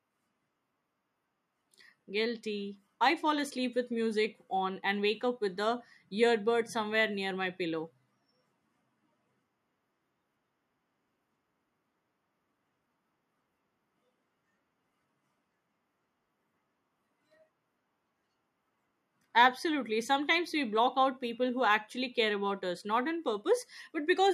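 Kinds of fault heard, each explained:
No audible faults detected.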